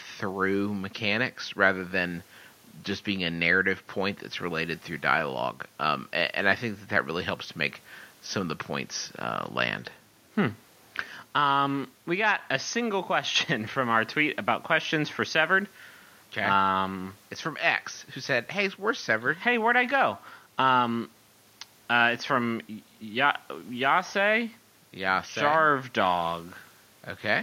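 No technical faults can be heard anywhere in the recording.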